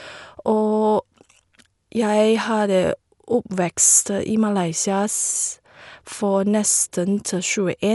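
Dolby Digital compression damage runs through the whole of this speech clip, from start to finish, and it is plainly audible. Nothing sounds above about 11.5 kHz, so the speech is dull, with a rough, fluttering noise clinging to its tonal parts. The likely cause is an AC-3 style encoder starved of bits. It narrowed the band and left many frequency lines without mantissa data for the decoder to fill with noise. That fits a rate around 64 kbps.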